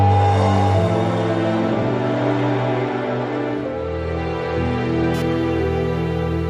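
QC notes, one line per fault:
5.14–6.50 s, computer activity noise: a buzzing, chirping texture appears and runs to the end of the clip, pulsing at a rate of around 500 Hz and sitting roughly 25 dB below the main sound. It rises and falls with load on the computer feeding the interface, not with the audio. Current drawn by the processor, graphics or mouse shifts the ground the audio circuit shares, so that activity leaks in as an independent, rhythmic buzz.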